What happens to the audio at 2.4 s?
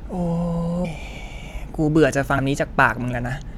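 Right around 2.37 s you get compressed frames skipped. A run of coded frames never made it to the output, either missing from the file or rejected by the decoder as damaged, so the speech jumps forward by roughly 150 ms. With a 23.2 ms frame length, that fits about 7 frames dropped in one go.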